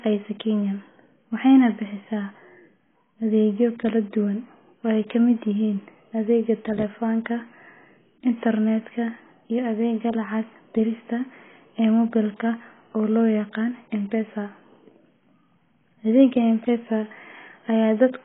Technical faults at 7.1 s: AAC compression

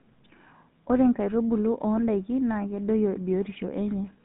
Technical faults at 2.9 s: GSM full-rate codec

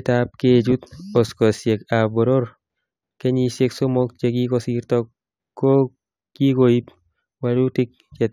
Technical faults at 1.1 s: imaging from linear upsampling

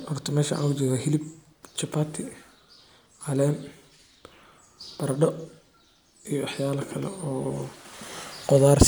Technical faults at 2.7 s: none

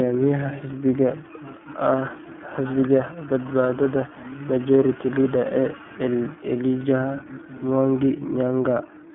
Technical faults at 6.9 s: iLBC codec

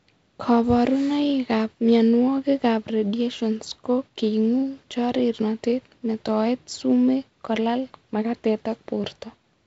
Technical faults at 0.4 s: none

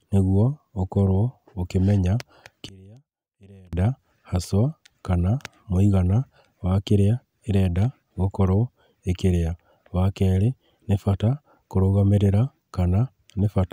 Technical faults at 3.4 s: one channel inverted

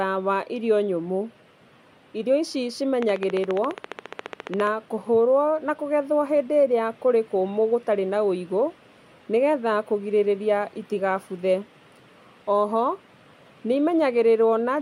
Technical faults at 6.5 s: none

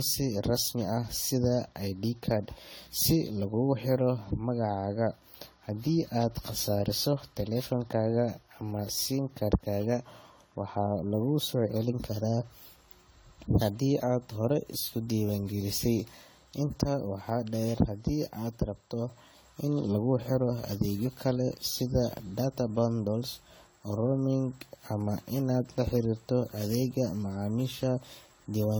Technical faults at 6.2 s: generation loss

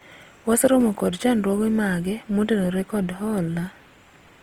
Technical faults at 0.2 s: Opus compression

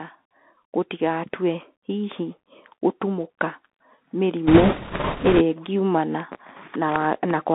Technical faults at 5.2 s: Bluetooth CVSD headset codec; automatic gain rising; bit errors on a Bluetooth voice link

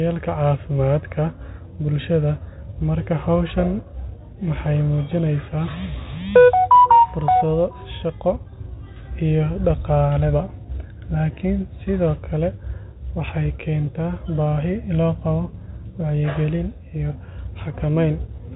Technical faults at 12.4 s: none

